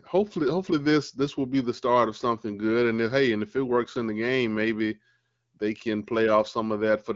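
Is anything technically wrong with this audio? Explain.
No, the speech comes through with no technical fault, carrying the band-limited character of the AMR wideband (HD Voice) codec with only light coding damage, consistent with a rate of around 12.65 kbit/s, where speech stays clear.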